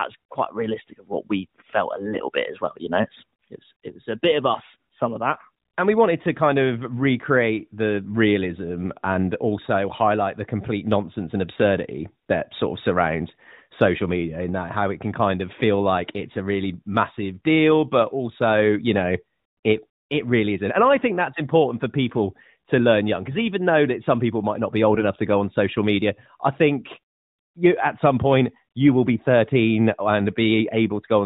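Around 2.13–2.20 s and again at 24.94–25.05 s there are AMR bit errors. A few percent of bits got flipped across a handful of frames, so the speech briefly goes hoarse and gargly on top of the narrowband AMR sound.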